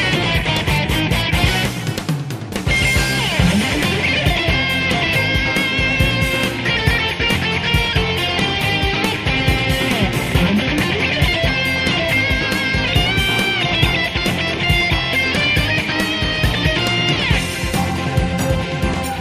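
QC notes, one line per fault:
15.34 to 17.63 s, train of clicks. A burst of sharp ticks sits on top of the sound for just over two seconds. There are about seven of them, arriving at roughly three per second with uneven gaps. Each click has much the same short, hard shape. They peak at around the level of the sound itself. The likely cause is electrical interference or a faulty connection injecting repeated pulses.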